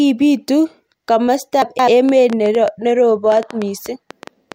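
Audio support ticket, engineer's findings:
Chunks out of order, 1.62–1.88 s: brief jumbled, garbled patch in the speech. One 85.33 ms block lands two blocks late, so the segment plays back scrambled. Nothing's missing, just reordered. Block size fits a 4096-sample buffer at 48 kHz. Suspect the buffering/write path reordering chunks under load, maybe a queue or thread handoff.

Train of clicks, 2.09–4.53 s: ticking/popping running right through to the end, pauses included. Around fifteen similar pulses at an uneven pace, averaging about 6.2 per second, peaking a few dB above the speech. Likely interference from nearby gear or a struggling interface injecting pulses. Check grounding, cabling and the interface.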